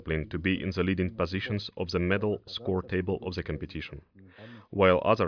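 No audible technical faults anywhere in the recording.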